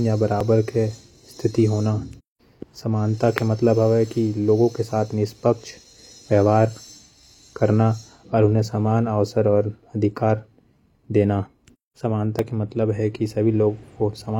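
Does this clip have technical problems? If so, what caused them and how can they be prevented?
Yes. An overlap between stream segments occurs at 0.41 to 0.44 s and again at 12.39 to 12.42 s, just before "के मतलब हे कि". At both points the time stamps of two neighbouring segments, which appear to be 1 s long, claim the same stretch of time. The player trims that stretch even though the speech there was never duplicated. About 30 to 40 ms is lost and the waveform jumps, which is heard as a tiny skip.

To prevent it, timestamp segments so that each one begins exactly where the previous one ends.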